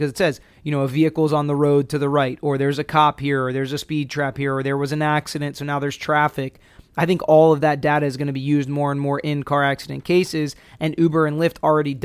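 No technical faults can be heard anywhere in the recording; the speech signal stays steady and intact throughout.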